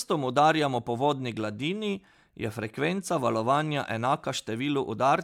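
No technical faults can be heard anywhere in the speech. Nothing in the audio calls for a timestamp or further comment.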